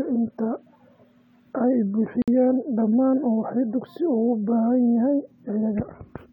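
At 2.22 s the speech drops out abruptly into a silence of about 58 ms, ending at 2.28 s. Both edges are smeared by the codec, and the speech then resumes exactly where it stopped. This is a gap at a join of encoded pieces. The audio was encoded in separate segments and spliced without trimming, so the encoder's start-up delay and the padding of the last frame were left in as dead air.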